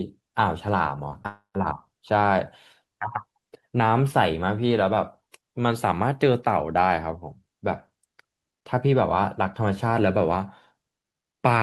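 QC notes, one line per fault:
1.23–1.26 s, short concealed packet loss: about 20 ms of audio is missing, and roughly 17 ms of it is covered by a continuation of the preceding sound before the signal rejoins, leaving a brief smear or wobble in the speech. What separates it from a dropout is its size. The gap is far too short to open any audible silence, so the repair blends straight back in and the speech keeps running with only a momentary blur.
1.26–1.56 s, long network dropout: straight after that smear, the speech gives way to a synthetic buzz or hiss carried on from the last sound for about 280 ms, fading out so that about 120 ms of it has become silence before the speech resumes further along, with that stretch gone. This is likely a lengthy interruption in arriving audio rather than a single lost packet. The fading fill and the dead air that follows it distinguish it from the brief concealment before it.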